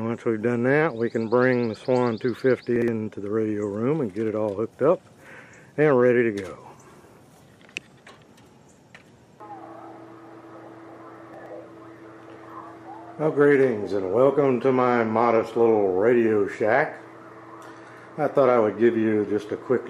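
At 2.76 to 2.88 s and again at 11.34 to 11.46 s, chunks play out of order: one 60 ms chunk arrives a single chunk late and swaps with its neighbour. The audio briefly jumbles, with three hard joins.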